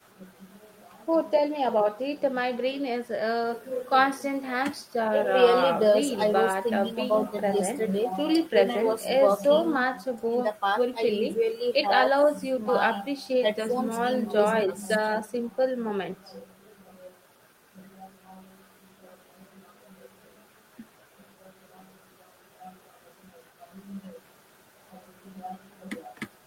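A speech recording with nothing technically wrong with it: there are no faults to place in time and no causes to give.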